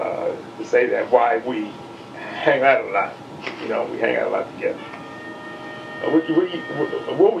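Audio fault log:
No technical fault can be heard anywhere in the audio, and the signal stays continuous and steady throughout.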